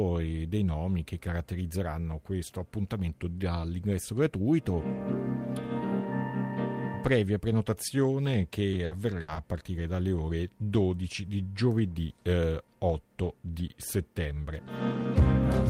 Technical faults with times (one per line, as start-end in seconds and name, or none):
8.71-9.38 repeated packet loss (robotic sound)